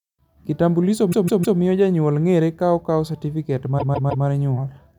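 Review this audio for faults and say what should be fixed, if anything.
Repeated frames show up twice in this speech, from 1.11 to 1.58 s and again from 3.78 to 4.25 s: a 157 ms block plays three extra times, stuttering and adding about 470 ms. That block length points to six compressed frames. Fix the writer or sender so frames aren't re-emitted.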